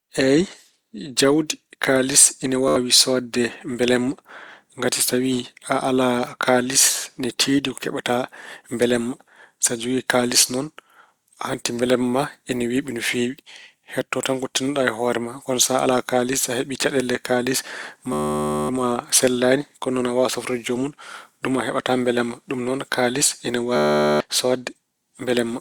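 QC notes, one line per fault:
2.68–2.76 s, Bluetooth stutter: about 80 ms of packets missing after "kaalis ine"; the receiver repeats its last short slice, giving a brief buzz before speech resumes further on.
18.13–18.69 s, Bluetooth stutter: around 560 ms of data lost after "so heɓi caɗeele kaalis"; the replayed buffer loops into a long machine-gun stutter, then speech jumps ahead.
23.76–24.20 s, Bluetooth stutter: about 440 ms lost after "noon kaalis ine"; repeated short slices form a sustained buzz, and speech resumes later as if it kept playing.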